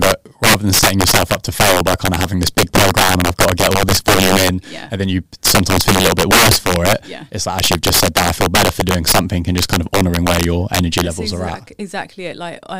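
Integer overflow runs through the whole speech clip: the signal is driven about 11 dB past full scale, and roughly 3 percent of samples exceed the integer limit. Instead of clamping, each such peak wraps to the opposite extreme, producing violent cracks on louder syllables, far harsher than clipping.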